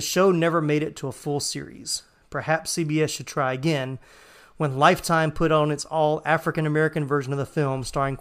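There are no technical faults to describe in this speech.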